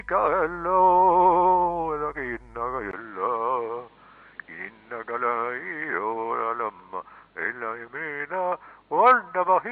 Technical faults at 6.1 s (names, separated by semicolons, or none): input switched to a poorer device